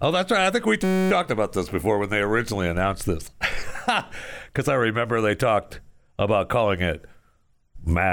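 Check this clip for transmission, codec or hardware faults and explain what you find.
One fault: a system hang loop in the speech, from 0.84 to 1.11 s, right after "right I think we" and before "about this before when". The sound turns into a steady buzz pitched at about 188 Hz. The computer or driver stalled while the sound hardware kept replaying the same 5.33 ms slice of its ring buffer, about 51 times, which fits a 256-sample buffer. Because each loop is so short, the repeats merge into a tone rather than a stutter.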